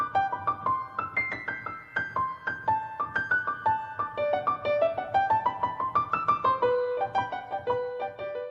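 No technical faults can be heard anywhere in this clip.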